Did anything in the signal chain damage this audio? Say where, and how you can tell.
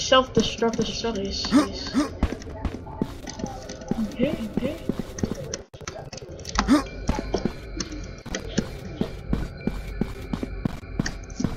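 Yes. The audio is likely being captured twice, through a second, slower path, so a doubled audio track runs from 0.73 to 5.33 s. A full-band copy trails roughly 400 ms behind, about 5 dB quieter, with no room decay, and it starts and stops abruptly.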